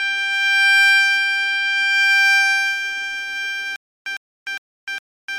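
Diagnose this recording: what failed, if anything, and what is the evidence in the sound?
Hard clipping occurs at a gain or converter stage. From 0.65 to 1.0 s the peaks are driven about 2 dB past full scale, and from 2.1 to 2.41 s about 1 dB past. The tops are sliced flat. That adds high harmonics, heard as crackle on the loudest moments.

A stutter with silent gaps starts at 3.76 s and runs to the end. A 106 ms fragment repeats four times, each followed by 302 ms of digital silence, giving a 408 ms cycle. A stalled stream or player replaying its last buffer is the likely cause. The missing audio is gone.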